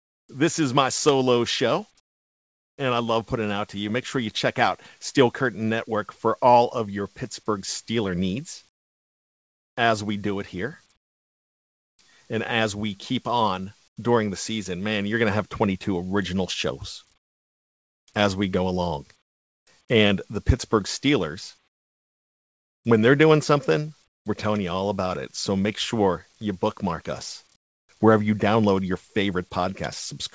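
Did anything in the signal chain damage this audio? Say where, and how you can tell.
Yes, at the call-processing stage: comfort noise in place of the background at 0.0–0.29, 2.0–2.78, 8.69–11.99 (before "and as we keep"), 13.88–13.97, 17.18–19.67, 21.68–24.26 and 27.56–27.89 s. Pauses become a steady, featureless hiss about 18 to 23 dB quieter, likely from discontinuous transmission with synthesised fill noise.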